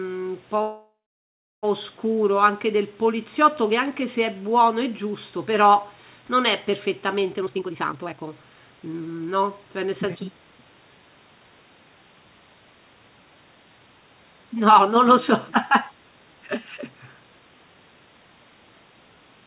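At 0.62 s the speech stops and the last sound hangs on as a short fading buzz, then falls to silence for about 0.7 s before resuming at 1.65 s with nothing skipped. This call audio freeze was likely caused by delayed packets draining the jitter buffer, so about 1 s of filler was inserted.

From 7.33 s to 10.97 s the speech sounds hurried, running at roughly 128% speed with its pitch unchanged. This is a jitter buffer speed-up: the buffer was overfull, so the receiver trimmed many short pitch-period slices, around a second in total, through the band-limited G.711 audio that stops near 4 kHz.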